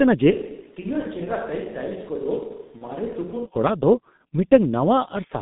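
G.723.1 codec damage runs throughout this speech clip: the band is held to roughly 150 Hz to 3.7 kHz, and the heavy, hoarse, blurred quality points to a low bitrate near 6.3 kbit/s. VoIP packet loss concealed by the speech codec occurs at 2.78 to 2.84 s, where the decoder extrapolates from its last voice model with fading gain, which fits a single lost 30 ms frame.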